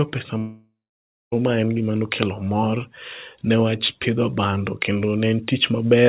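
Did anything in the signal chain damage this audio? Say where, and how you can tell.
Yes, at the network stage: a long network dropout from 0.38 to 1.34 s, about 0.94 s of lost speech. The last sound before the gap is stretched into a fading buzz that then gives way to roughly 0.58 s of silence, and the speech resumes further on with that stretch missing. The sound band stops at 4 kHz throughout, as G.711 mu-law does. A brief packet loss would be hidden smoothly. The decaying fill followed by dead air is what sets this apart, and a lengthy interruption in arriving packets is the likely cause.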